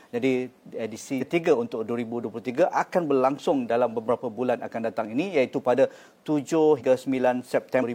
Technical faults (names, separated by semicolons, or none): compressed frames skipped